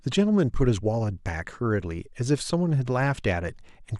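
Nothing goes wrong anywhere in the speech here, so there's no technical fault to walk through.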